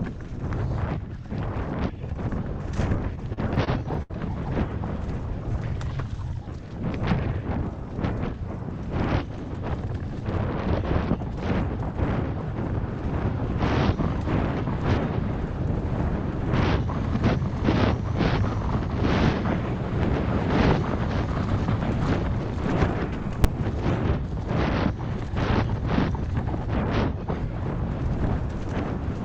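From 3.15 to 4.12 s there are repeated stalls (stutter): packets reached the receiver late or more slowly than they were played, so its jitter buffer ran dry eight times. Each time, the receiver stretched the last sound until data arrived, filling 182 ms in total, about 19% of that stretch, with the longest wait 72 ms. Nothing is lost, but the audio hesitates and drags in a run of small hitches.

At 23.44 s comes invalid numbers at full scale: a calculation produced infinite or invalid values, and the output was pinned at one extreme, far beyond the audio's peaks, for a block lasting 5.8 ms, which fits a 256-sample block. Because the block is so short, there is no audible silent stretch between pops. It is heard as a single loud bang cutting across the sound.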